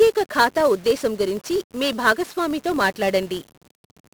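1-bit DFPWM compression runs throughout the speech: each sample is a single bit nudging an adaptive level, so heavy broadband quantisation noise makes everything fuzzy and crackly, burying the treble in hiss, which fits a stream of about 48 kbps. A filter restarted on every block also runs the whole way through: the filter drops its memory and begins each block from silence, leaving a small transient at every boundary. This produces a 43.1 Hz buzz that rises and falls with the speech level, which fits a 1024-sample block.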